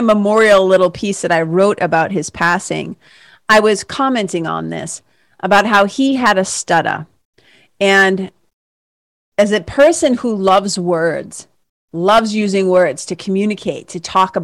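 Hard clipping runs through the whole speech clip: the level was pushed about 11 dB past what the chain could pass, so peaks get sliced flat on around one or two percent of samples. Those squared tops spray high harmonics, giving a gritty crackle on every louder syllable.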